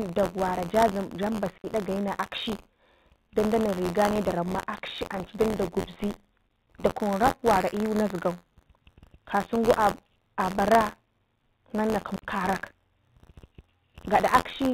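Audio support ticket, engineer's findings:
Buffer tearing throughout the speech: steady robotic buzz near 86.1 Hz, present only while signal plays. Playback ring buffer, rate fits a 512-sample buffer. Writer and reader cross each period; a small slice repeats audio about 40 ms old, hard joins.

Packet loss filled with silence at 1.58–1.64 s and 12.16–12.22 s: 60 ms dropouts, hard edges. Network receive path, consistent with three lost 20 ms packets. Missing audio replaced by silence, not concealed; G.711 band limit audible beneath.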